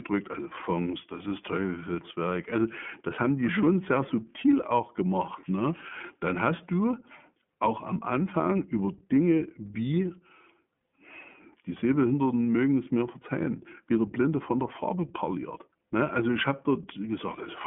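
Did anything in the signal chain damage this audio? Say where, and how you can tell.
Yes. The damage sits at the codec stage: the whole speech clip has passed through the iLBC codec, and the coding is plainly audible from start to finish. Nothing reaches above 3.6 kHz, and the band sits roughly between 150 Hz and 3.4 kHz, giving a narrow telephone sound. Each 30 ms frame's excitation is coded on its own, which fits the 13.33 kbps mode. That leaves the voice slightly rough and synthetic-sounding rather than smooth.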